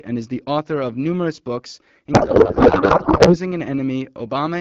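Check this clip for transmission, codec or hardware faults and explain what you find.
A codec payload misread runs from 2.14 s to 3.37 s, starting right after "author of numerous books". The receiving end is unpacking the AMR wideband frames with the wrong bit layout, which fits octet-aligned payloads being parsed as bandwidth-efficient ones, so every field lands in the wrong place. For about 1.2 s the speech gives way to garbled noise and warbling that barely tracks it, until the two sides agree again. Around it, the HD Voice coding sounds clear, consistent with a rate near 12.65 kbit/s.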